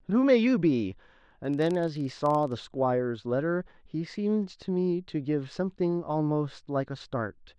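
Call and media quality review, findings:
Filter restarted on every block, 1.45–2.60 s: filter state dropped at each block boundary, so each block starts from silence with a small transient. Regular ticking buzz near 23.4 Hz that tracks speech level, which fits a 1024-sample block.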